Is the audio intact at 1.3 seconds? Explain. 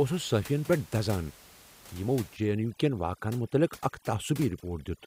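Yes, the audio is intact at 1.3 seconds, with only the room's own background noise sitting about 21 dB below the speech.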